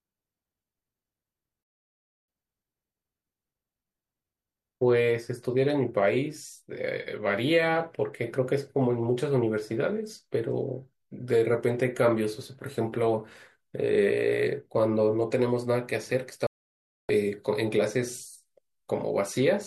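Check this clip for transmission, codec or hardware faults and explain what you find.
Two digital broadcast dropouts cut into the speech, at 1.63 to 2.28 s and at 16.47 to 17.10 s, about 0.65 s and 0.62 s long. The receiver muted when the incoming frames failed, and whatever was sent in those windows is gone. Each gap shows as a flat line on the waveform and a blank vertical band across the spectrogram.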